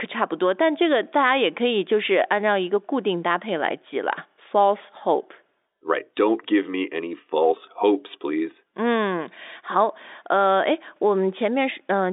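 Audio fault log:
No faults heard in this telephone-band speech.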